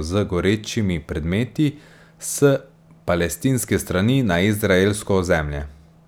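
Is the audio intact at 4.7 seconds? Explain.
Yes, at 4.7 seconds the speech plays through intact, with no dropout, click, distortion or other fault at that moment.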